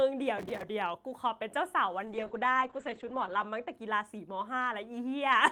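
Right at the start, from 0.38 to 0.63 s, there's a burst of processor overload crackle: a gritty, tearing texture laid over the speech for about a quarter of a second. The processor isn't finishing its audio buffers in time, and each missed deadline gets patched by replaying a scrap of old audio with hard edges. The grain of it fits very short buffers, a few milliseconds each, with somewhere around twenty missed back to back before the load eases.

Then from 2.08 to 3.79 s you get a call bitrate drop. The encoder got squeezed, something like 32 kbps down to about 10 kbps going by the sound, so the speech goes coarse and watery. The top end also collapses, with the audio band shrinking from 20 kHz to 8 kHz, which makes it muffled. It sits at its worst for about 1.39 s before the bitrate climbs back and the detail returns.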